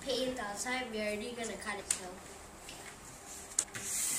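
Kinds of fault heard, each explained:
Compressed frames skipped: Whole blocks of the encoded audio never reach the output, either missing from the stream or rejected by the decoder as damaged. The sound jumps forward at 1.79 s, losing roughly half a second, about twenty frames. It jumps again at 3.62 s, losing around 150 ms, about seven frames. The frames here are 26.1 ms long.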